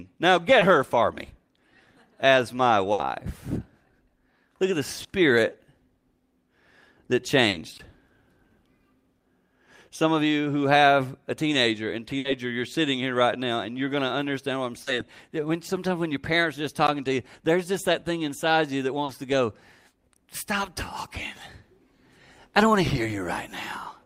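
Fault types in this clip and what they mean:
short concealed packet loss: Audio of 20 to 40 ms failed to arrive in time, and the receiver filled each hole by extending the preceding sound before blending back. This is heard as brief smears or wobbles at 0.59, 5.03, 7.49, 14.83 (after "to understand what I'm") and 19.05 s.
burst of packet loss: About 60 ms went missing in one run, twice. The receiver stretched the last sound as a decaying buzz or hiss, then the audio jumped ahead. This happens at 2.93 s after "as my" and at 12.19 s, between "have a teenager and" and "you're sitting here right".
block of digital silence: Short stretches of samples were replaced by zeros, 16 ms at 7.78 s and about 14 ms at 16.87 s. The signal drops abruptly to silence and returns without any fade, giving a tick-like hole.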